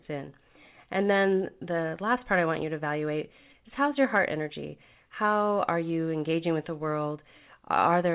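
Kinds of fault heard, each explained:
No kinds of fault are heard in this speech.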